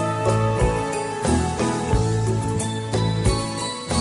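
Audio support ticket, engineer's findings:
No audible faults found. Nothing to escalate.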